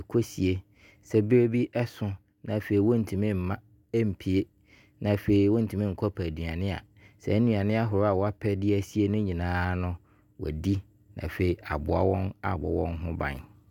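No technical faults can be heard anywhere in this speech recording. There is nothing to place on a timeline, so no times or values apply.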